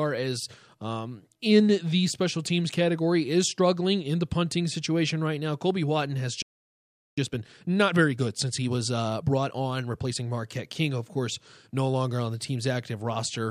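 At 6.42 s the speech cuts out mid-flow and the output stays silent until 7.18 s, a gap of about 0.75 s. This is a playback stall: the player most likely ran short of buffered data or had its audio thread held up, so nothing reached the output until it recovered. The speech then resumes.

From 7.18 s to 10.18 s the player works off the backlog that built up during the gap, running at 1.25 times normal speed. This time-compressed catch-up removes short slices of the signal and cross-fades across the joins, which shortens the material while keeping the pitch where it was. Across those three seconds the speech sounds hurried.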